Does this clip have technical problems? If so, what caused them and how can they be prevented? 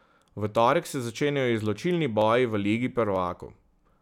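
Yes, the clip has dropped samples. A tiny run of samples, likely under half a millisecond, went missing from the stream three times, so the waveform jumps abruptly and produces a sharp single click: at 1.17 s, between "torek se" and "izločilni boji v"; at 2.22 s, just before "boji v"; and at 3.16 s. Keeping buffers large enough and the capture and processing chain free of overloads prevents such losses.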